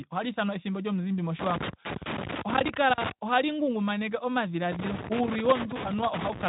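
Loose connector crackle runs from 1.39 to 3.12 s and again from 4.72 s to the end of this speech clip: a worn contact making and breaking chops the signal into irregular scratchy bursts. Behind it, the speech is band-limited to about 3.8 kHz with a light Speex coding character.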